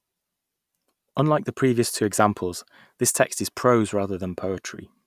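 No technical faults can be heard anywhere in the recording.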